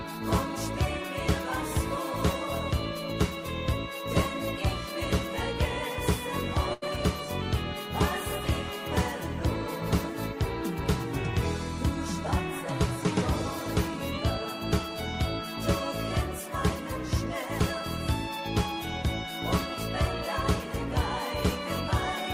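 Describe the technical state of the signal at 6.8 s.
At 6.8 s there is a burst of packet loss, from 6.73 to 6.84 s. Consecutive packets never arrived in time. The receiver stretched the last sound for about 83 ms, fading it out as a buzz or hiss. About 80 ms of audio is simply missing when playback resumes.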